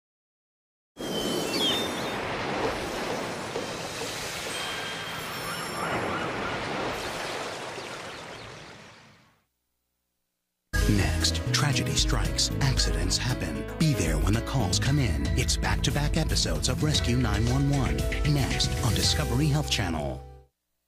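Nothing stood out on listening, and there is no point in the recording where a technical problem can be heard.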